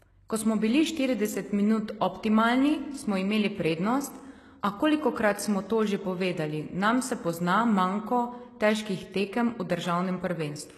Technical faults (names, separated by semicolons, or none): HE-AAC compression